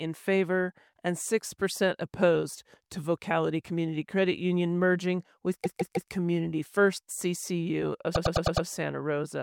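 At 5.63 s there's a repeated-frames stutter: a 157 ms chunk of compressed data plays three extra times, adding 0.47 s. At 8.14 s a 104 ms block loops five more times, stretching things by 0.52 s.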